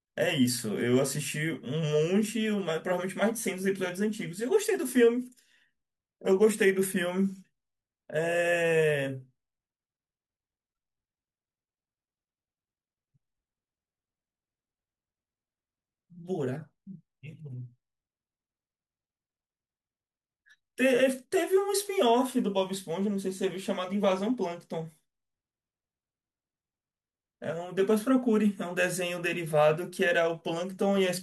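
Listening to this speech recording, nothing technical stood out at any point.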